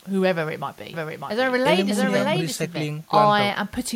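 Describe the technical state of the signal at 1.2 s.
At 1.2 s the speech is heard twice: a second, full-band copy trails the original by roughly 0.7 s, a few decibels quieter, with no reverberant tail or room colouring, and it cuts in and out abruptly. This doubled audio track runs from about 0.93 s to 2.85 s. The likely cause is the same signal being captured a second time through a slower path, so two out-of-step copies are mixed together.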